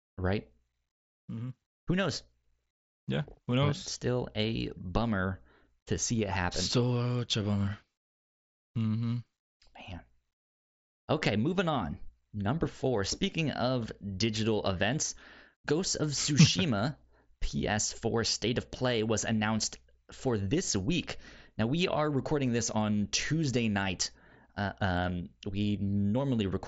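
No technical faults can be heard in this speech recording.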